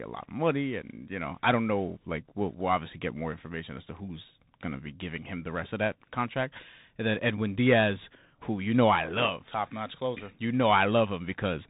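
From start to finish the speech carries the sound of a Bluetooth CVSD headset codec. Nothing above 4 kHz survives, and the damage is plainly audible: s sounds turn scratchy, loud high-frequency moments distort where the one-bit up-or-down steps cannot keep pace, and a granular hiss sits under the speech. That grainy, slope-limited roughness is what sets it apart from a clean telephone band-limit, and it fits a 64 kbps CVSD link.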